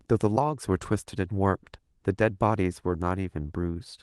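Speech carried through Opus voice compression at 24 kbps in hybrid mode with full bandwidth, leaving only light coding damage and no technical faults.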